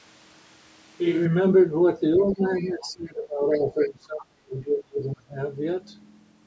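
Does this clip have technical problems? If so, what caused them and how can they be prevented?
Yes, there are three problems.

Switch to a distant microphone: From the start to 1.25 s the speech sounds roomy and hollow, thin in the bass, about 5 dB quieter, with room noise only about 30 dB below it. The close microphone's feed was likely missing, so a farther one was used. On a spectrogram the low end is sparse and a noise floor fills the gaps. The waveform jumps in level at 1.25 s. Monitoring the close microphone's input during recording prevents this.

Other side's voice leaking through: Faint scraps of a second voice, about 20 to 25 dB below the speech, appear at 2.14–2.34 s, 2.58–2.91 s, 3.52–3.56 s and 3.79–3.89 s. The likely cause is loudspeaker playback reaching the microphone that the echo canceller did not fully remove. A spectrogram shows weak, separate harmonic traces that do not line up with the main voice. 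Using a headset stops the loudspeaker sound from reaching the microphone.

Speech suppressed in double talk: Between 2.16 and 5.39 s, for about 3 s in total, the speech dips, dropping by as much as about 30 dB while the other side talks. This is likely the echo canceller turning everything down because it could not separate the two voices. The waveform shows the envelope sinking, and the spectrogram shows the energy thinning out. The band-limiting that leaves nothing above 8 kHz comes from normal call processing and is not part of this fault. A headset prevents this too, because it removes the echo that triggers the suppression.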